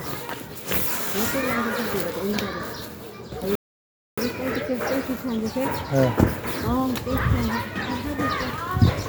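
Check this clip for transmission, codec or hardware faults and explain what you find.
One fault stands out: a rebuffering stall. From 3.55 s to 4.18 s the sound drops abruptly to silence, then picks up again exactly where it broke off, with nothing skipped or repeated. That gap adds about 0.62 s to the playback. It happens because the player exhausted its store of downloaded audio and had to halt until more data arrived over the connection. Once enough was buffered, it resumed from the same point, so time is inserted rather than material lost.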